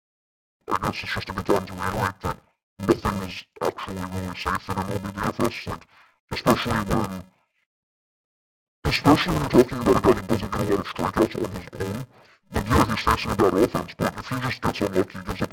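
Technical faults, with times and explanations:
Throughout: interleaved audio read as planar, 2.67 ms blocks of 128 samples. Speech turns dull and robotic with a buzz at 375 Hz and no clear octave drop.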